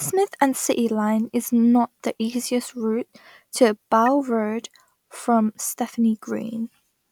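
A speech clip with a corrupt frame decoded at 4.06 s, right after "the easiest route to": a brief glitch of misplaced energy lasting about one frame, with the error peaking around -20 dBFS.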